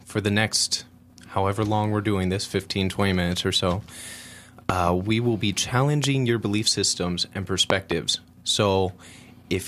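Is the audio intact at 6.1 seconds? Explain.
No. Just before that point, at 6.04 to 6.06 s, a single loud pop occurs. A sudden voltage pulse, likely from a plug, switch, static discharge or driver glitch, enters the signal path and is shaped by the downstream circuitry into a brief spike. It lands as one sharp pop, peaking roughly 15 dB above the speech, while the speech carries on underneath. By 6.1 s the pop has just passed.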